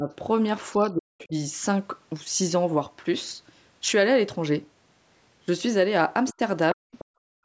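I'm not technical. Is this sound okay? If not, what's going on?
No, there are problems typical of a call where both people talked at once.

Speech suppressed in double talk: the voice dips or briefly vanishes at the very start (to 0.09 s), from 0.91 to 1.34 s, and from 6.75 to 6.86 s. This is likely the echo canceller turning everything down when both sides spoke together.

Other side's voice leaking through: faint scraps of a second, quieter voice appear at 1.19 to 1.25 s, 6.27 to 6.34 s and 6.92 to 7.05 s, likely because the loudspeaker's sound wasn't fully removed from the microphone.

Background gated by the echo canceller: from 7.14 s to the end, the room sound drops sharply away because the canceller clamped the microphone down while the loudspeaker played.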